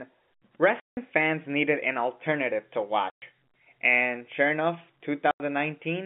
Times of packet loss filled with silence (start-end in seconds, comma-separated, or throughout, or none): 0.80-0.97, 3.10-3.22, 5.31-5.40